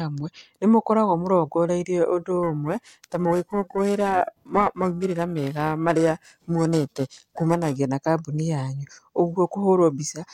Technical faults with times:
2.43-7.76 periodic clock jitter

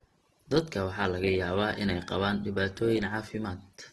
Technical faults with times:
0.00-3.92 Opus compression

